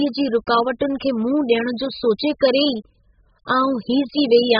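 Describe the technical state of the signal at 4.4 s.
At 4.4 s the speech sounds dull and smeared, with a warbly, fizzy texture on sustained sounds and sibilants and nothing above 5 kHz. This runs through the whole clip and points to heavy AAC compression, likely AAC-LC at a very low bitrate around 8 kbps.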